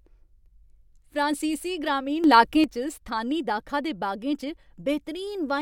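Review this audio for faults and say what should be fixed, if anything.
From 2.24 s to 2.64 s, the speech suddenly gets louder by about 8 dB. The background noise rises with it, by the same amount and at the same instant. Both drop back together at 2.64 s. This is a sudden gain jump. The likely cause is a digital gain change applied from one sample to the next, with no ramp. To prevent it, apply every gain change through a short smoothing ramp.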